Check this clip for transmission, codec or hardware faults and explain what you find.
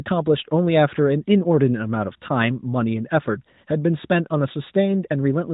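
Nothing stood out on listening to this clip.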